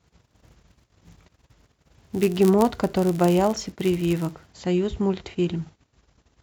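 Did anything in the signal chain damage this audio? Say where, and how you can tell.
Yes. From 0.00 to 4.52 s there is a block size mismatch (padded) in the driver or buffer stage. One stage hands over blocks slightly shorter than the next stage expects, and the shortfall in each block is filled with zeros. Those tiny silent gaps repeat at the block rate, heard as a buzz at about 99.6 Hz under the speech, which points to roughly 10 ms blocks. The speech also runs about 0.4% slow (0.996×).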